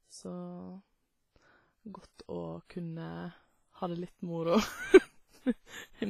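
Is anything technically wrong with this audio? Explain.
Yes. Throughout the speech there is heavy WMA compression damage, likely from encoding at a low bitrate, which fits roughly 24 kbps. Nothing is present above 15.3 kHz, where the encoder has cut the band. Because this transform codec spreads its quantisation noise across long blocks of tens of milliseconds, each sound rings and smears rather than starting cleanly. Quieter spectral detail has been zeroed out, leaving a washy texture and a hiss that swells and fades with the level of the speech.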